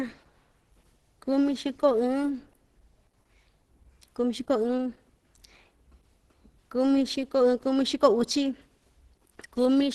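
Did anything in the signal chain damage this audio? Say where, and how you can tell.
Yes. The damage sits at the codec stage and lasts the whole clip. Nothing reaches above about 12.1 kHz, so the top octave is simply gone. The speech sounds muffled and hoarse throughout, with rough, grainy edges on sustained sounds. This is likely Opus compression at a low rate, which fits about 16 kbps in hybrid mode. There the encoder codes the lower band as speech and fills the upper band coarsely, with a super-wideband ceiling.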